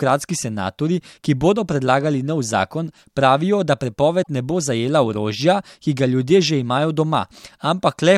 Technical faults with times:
4.19-4.27 damaged data in a compressed stream
6.86-7.44 CD scratch ticks

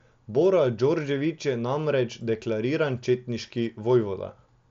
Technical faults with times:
none

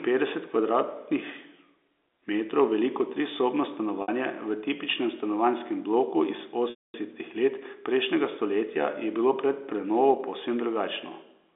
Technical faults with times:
4.02-4.08 packet loss with pitch repetition
6.70-6.94 packet loss with pitch repetition

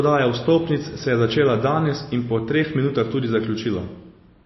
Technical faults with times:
0.00-4.46 MP3 compression

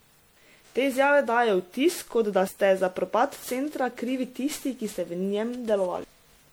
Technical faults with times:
0.00-6.52 generation loss

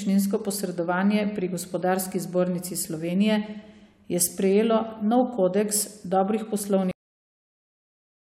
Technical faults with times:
6.91-8.32 cut-off end

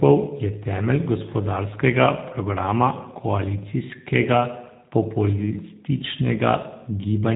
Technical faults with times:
0.00-7.36 G.729 codec

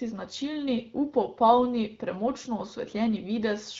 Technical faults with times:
none

